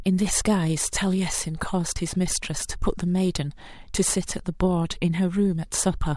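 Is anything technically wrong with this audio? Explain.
No, nothing technically wrong is audible in this speech recording.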